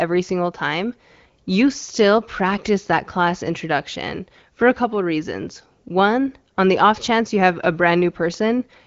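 No technical faults can be heard anywhere in the speech.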